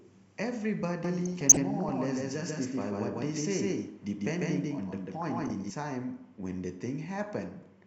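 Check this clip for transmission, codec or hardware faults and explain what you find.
Two things stand out in this speech clip: a doubled audio track running through the middle, and two short bursts of DAB burbling inside that stretch.

From 1.04 s to 5.70 s you hear a doubled audio track. A second full-band copy of the speech trails the original by roughly 150 ms at about the same level. It's dry, with no room tail, and it cuts in and out abruptly at both ends. The likely cause is the signal being picked up a second time through a slower path and mixed back in, or an edit leaving two copies out of step.

From 1.25 s to 1.89 s, and again from 5.22 s to 5.50 s, there's DAB burbling. It shows up as short blips of noise in single sub-bands sitting over the speech. Weak reception lets bit errors slip past the error correction into the MP2 data. Corrupted samples put short blips of noise in single sub-bands, and corrupted scale factors make sub-bands jump in level for up to a frame. 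The first burst is clearly the longer of the two.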